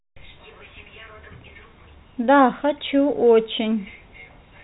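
No faults can be heard.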